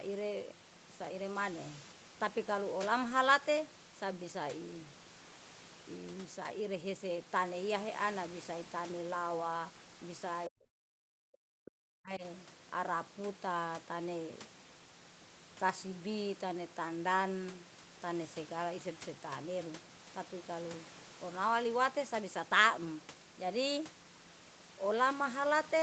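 Speech, and from 10.48 to 12.23 s it gets pulled down in chunks, for about a second and a half in all, dropping by roughly 40 dB at its deepest. That's speech suppressed in double talk, likely from the echo canceller treating this talker as echo while the far side spoke. The sound tops out at 8 kHz, as expected through the call path.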